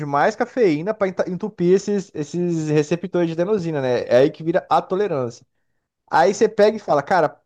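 Brief crackle rides the loudest peaks of the speech at 0.21–0.42 s, 2.77–2.80 s, 4.14–4.25 s and 4.72–4.77 s, then returns for a longer stretch from 6.14 to 7.26 s. This is hard clipping. The signal overshoots what the stage can pass by only about 1 dB, or about 2 dB in the third and last passages. Its peaks are sliced flat, and those flat tops spray high harmonics, giving the roughness rather than a full fuzz.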